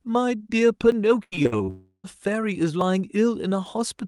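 At 0.92 s the speech jumps forward slightly rather than pausing. That is a dropped buffer (overrun), likely the program failing to collect its samples before the hardware overwrote them, losing roughly 10 ms and splicing the two sides together. The same skip returns at 2.81 s.

From 1.23 s to 1.70 s the speech turns choppy, stuttering in and out. This is repeated packet loss: six holes opened in quick succession, the longest 83 ms, and each was patched by stretching the last bit of sound. About half of this stretch is concealment rather than real audio.

Straight after, from 1.70 s to 2.06 s, the speech gives way to a fading buzz and then about 70 ms of silence before it resumes further on. This is likely a long network dropout. Around 340 ms never arrived, so that part of the speech is simply missing.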